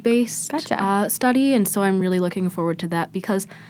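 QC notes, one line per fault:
2.81–2.83 s, lost packet rebuilt from error correction: just after "so I'm really looking", about 20 ms of speech turns briefly rougher and noisier without any gap. This points to one lost packet whose low-bitrate copy, carried in the next packet, was decoded in its place.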